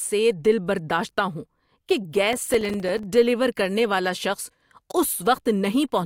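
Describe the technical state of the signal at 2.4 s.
At 2.4 s the speech is inside a processor overload crackle from 2.33 to 3.04 s: around twenty missed few-millisecond buffers leave silent gaps, a gritty burst rather than one clean dropout.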